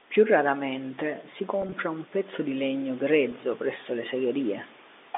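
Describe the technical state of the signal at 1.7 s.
At 1.7 s the signal is inside a burst of packet loss with pitch repetition running from 1.62 to 1.72 s. About 50 ms of audio went missing, scattered across that 100 ms window in short gaps no longer than 20 ms, which fits roughly five 10 ms packets. The receiver filled each gap by repeating the last pitch period, so the speech briefly takes on a slightly held, buzzy quality within the narrow 250 Hz to 3.6 kHz telephone band.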